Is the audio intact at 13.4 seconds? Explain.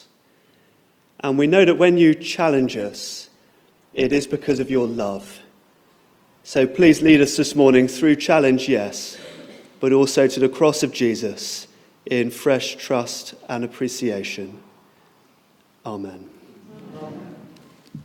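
Yes, the audio is intact at 13.4 seconds, with no dropout, glitch or other fault audible at that moment.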